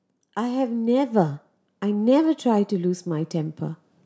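From 0.1 s to 3.89 s, automatic gain rising: the call's gain control judged the input too quiet and raised its level by about 12 dB, so voice and background swell together. On a waveform the envelope widens steadily; a spectrogram brightens across all bands, topping out at 8 kHz.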